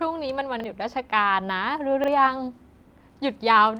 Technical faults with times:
0.60-0.64 repeated buffer
0.81-0.83 lost packet rebuilt from error correction
2.04-2.08 repeated buffer

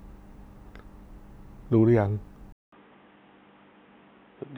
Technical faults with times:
2.52-4.58 input switched to a poorer device

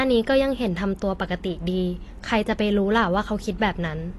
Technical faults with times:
0.00-4.18 AAC compression

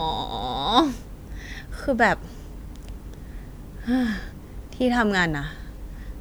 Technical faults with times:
none

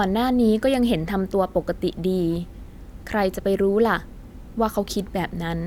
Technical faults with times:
none

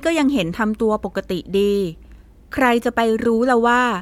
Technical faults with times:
none

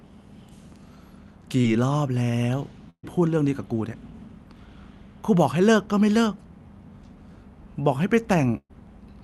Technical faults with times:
1.61-1.66 short concealed packet loss
2.90-3.05 burst of packet loss
8.57-8.71 burst of packet loss

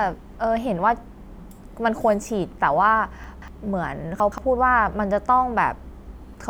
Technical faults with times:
3.24-3.48 chunks out of order
4.20-4.38 chunks out of order

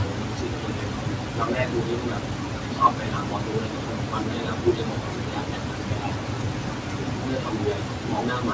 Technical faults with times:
0.00-8.54 noise suppressor artifacts
0.00-8.54 speech cut by the noise suppressor

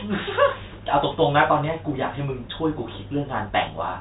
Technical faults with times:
none

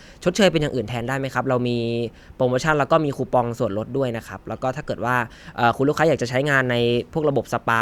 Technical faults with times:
none

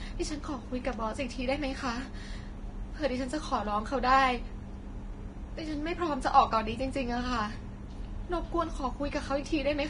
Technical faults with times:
0.00-9.89 Vorbis compression

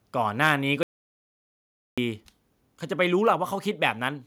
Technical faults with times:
0.45-0.49 microphone overload
0.83-1.98 audio dropout to silence

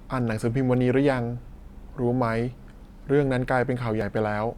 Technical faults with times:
4.01 overlap between stream segments

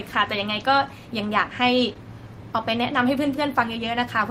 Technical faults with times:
1.93-1.97 short concealed packet loss

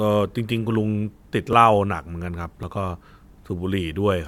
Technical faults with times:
1.53 dropped buffer (overrun)
2.63 dropped buffer (overrun)

